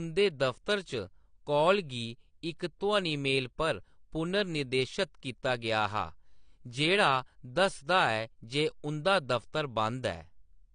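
Throughout the speech, nothing is heard above 9.9 kHz, so it sounds dull and muffled and carries the artefacts of heavy compression. The likely cause is low-bitrate audio saved at a high bitrate: a heavily compressed file was re-encoded as high-rate MP3, which cannot restore the missing detail.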